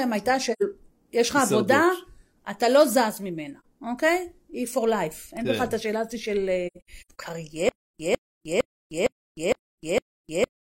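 At 0.52 s the speech drops into a soft-edged hole until 0.63 s. This is AAC frame loss with muting. About 85 ms of audio is missing, which fits two lost frames. The decoder zeroed their spectrum, and the overlapping windows fade the sound out and back in. A shorter hole of about 43 ms, matching one frame, falls from 3.60 to 3.65 s. From 6.67 to 7.18 s, several more dropouts are scattered across half a second. About 300 ms is lost in all, and the longest gap runs around a tenth of a second.

From 7.69 s to the end, the sound becomes a stutter with silent gaps. A 152 ms fragment plays, then about 306 ms of digital silence follows. The cycle repeats every 459 ms, six times. The likely cause is a stalled stream or player that replays its last fragment at each retry and then runs empty. The audio that should have played during this stretch never arrives.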